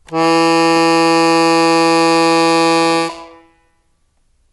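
Throughout the music, nothing is heard above 11.5 kHz, and a rough, fluttering noise clings around sustained tones, likely from Dolby Digital compression at a rate that fits about 64 kbps. Unlike plain low-pass filtering, emptied frequency lines come back as grainy dither noise.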